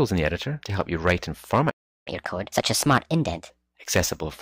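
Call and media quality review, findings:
Playback stall, 1.70 to 2.08 s: audio cuts out mid-flow for 355 ms, then resumes. Likely player buffer underrun or blocked playback thread in the client audio path, leaving the output starved until data arrived again.

Catch-up at higher speed, 2.08 to 3.50 s: directly after the gap, audio runs at 1.25x with pitch raised by about four semitones, then settles to normal. The player resamples its backlog faster to recover the time lost in the stall.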